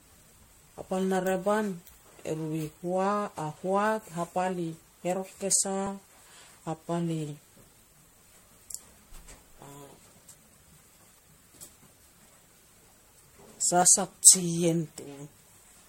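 Speech clip with generation loss throughout: the sound is swirly, smeared and hollow beyond what a single encode at around 60 kbit/s would give, consonant attacks blur, and nothing remains above 16.5 kHz. The likely cause is about seven successive MP3 decode-and-re-encode passes, each requantising on a shifted frame grid. At 13.82 s there is audio missing between chunks: a skip of roughly 20 ms where the two sides are butted together without a gap, likely lost at a boundary in a chain processing 4-second chunks.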